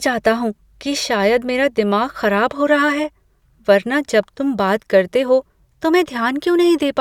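Speech recording with no audible technical faults.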